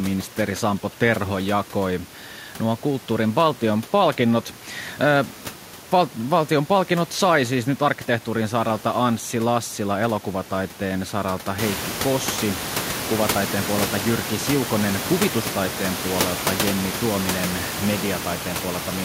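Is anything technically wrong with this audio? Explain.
No, the speech signal is technically sound, and the only change is background room noise that rises by about 14 dB from around the 11.5-second mark to sit about 10 dB below the speech, which belongs to the recording environment rather than to the system.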